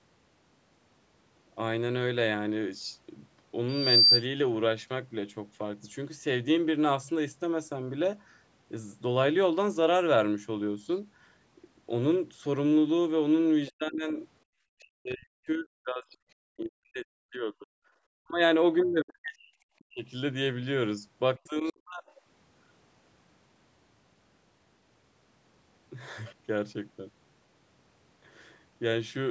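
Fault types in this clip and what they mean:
loudspeaker feedback squeal: A microphone picks up the loudspeaker it drives, and at one frequency the loop gain exceeds unity, so that tone keeps amplifying itself. Here a pure 4.7 kHz whistle swells over about a third of a second from 3.68 s and holds until 4.23 s, ending well above the speech, around 10 dB louder. A spectrogram shows one bright horizontal line at 4.7 kHz growing in intensity. The waveform's envelope fattens steadily across that stretch.
other side's voice leaking through: The far end's audio, played on the talker's loudspeaker, returns through the microphone when echo cancellation falls short. In this clip it is only a brief scrap, from 13.68 to 13.72 s, roughly 25 dB below the main speech, and is likely residual echo. A spectrogram shows a faint, short smear of speech-like energy. On the waveform it is a tiny low-level blip hardly distinguishable from the surrounding signal.
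speech suppressed in double talk: When both sides talk at once, the echo canceller cannot separate the local talker from the loudspeaker echo and attenuates both. The speech here sinks sharply, by roughly 35 to 40 dB at the deepest, at 13.69–14.19, 14.82–16.2, 16.56–17.72, 18.19–18.41, 18.83–20.06 and 21.38–22.03 s. This is likely double-talk suppression. The waveform shows these spans collapsing toward silence, and a spectrogram shows the harmonics and upper bands fading to near-blank patches.
background gated by the echo canceller: With the loudspeaker active, the canceller clamps the microphone hard, so even the room tone vanishes for an instant. Here the background falls out from 14.47 to 14.54 s, about 70 ms, dipping by roughly 35 dB before returning when the canceller releases. A spectrogram shows a narrow vertical dark gap across all frequencies. On the waveform it is a brief flat stretch where the noise floor drops and then springs back.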